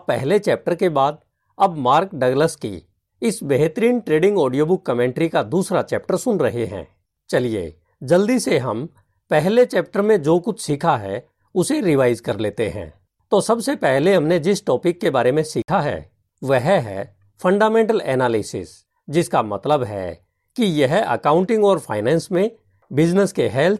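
At 15.62 s the speech drops out completely for about 61 ms, until 15.68 s. The edges of the gap are abrupt or fade over a few milliseconds. When the sound comes back, it does not pick up where it stopped. It carries on as if it had kept playing, so that stretch is simply missing. This is likely a Bluetooth dropout: audio packets arrived too late for the headphones and were discarded. A gap this long fits roughly three lost packets.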